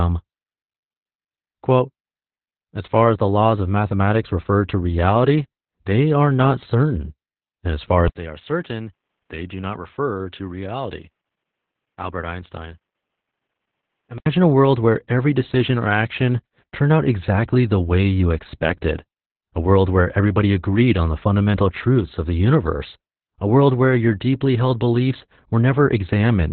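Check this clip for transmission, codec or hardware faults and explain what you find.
The clip has one codec fault, present from start to finish: Opus voice compression. Nothing reaches above 4.3 kHz, so the speech is narrowband. The sound points to Opus in its SILK speech mode at a very low rate, around 8 kbps. The excitation is coded coarsely, so the speech sounds muffled, hoarse and slightly robotic.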